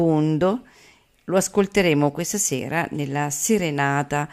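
Nothing in the recording stood out as a technical fault on listening.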